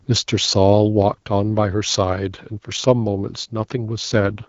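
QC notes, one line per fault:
3.97–4.48 s, AMR rate drop: the link weakens and the AMR-WB coder steps down from 12.65 to 6.6 kbit/s, giving up speech detail for error protection, so the last half second of speech turns rough and synthetic with no gap or narrowing of the band, against the light coding wear of the wideband stream before it.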